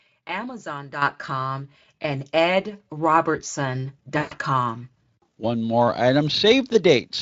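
Right around 1.02 s there's a microphone volume step-up: the input level jumps by about 9 dB in one go, and the background comes up right along with the speech, so it's clearly the device gain moving rather than anyone talking louder. That's the call software deciding the mic was too quiet and bumping the hardware input volume in a single step instead of easing it up. Everything after that point just sits louder.

Then from about 4.17 s to 4.34 s you get VoIP packet loss concealed by the speech codec. Roughly 140 ms of audio never arrived, which fits a run of about seven 20 ms frames. The Speex decoder papers over the gap by repeating its last pitch and spectral shape with the gain dropping frame by frame, so the speech smears into a stretched buzzy tone or coloured noise that fades away. Because each concealed frame builds on the previous one, the sound stays weak and a bit warped for a short stretch even after packets start coming through again. 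The Speex coding itself is at a fairly generous rate, and it adds only light coding damage of its own.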